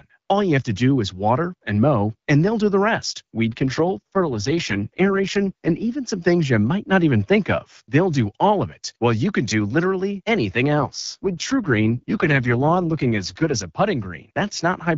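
From 3.48 to 5.84 s and again from 10.80 to 13.56 s, the speech turns rough and raspy with no gap or narrowing: an AMR rate drop, consistent with the wideband codec falling from 12.65 to about 6.6 kbit/s on a weak link.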